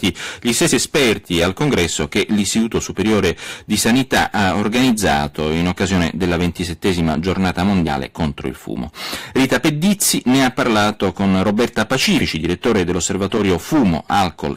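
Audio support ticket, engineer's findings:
Hard clipping through the whole speech clip, harsh fuzz on every loud syllable. Signal driven about 18 dB past what some stage could pass, so peaks get sliced flat, around a tenth of samples. Flat tops throw high harmonics. Check gain staging upstream.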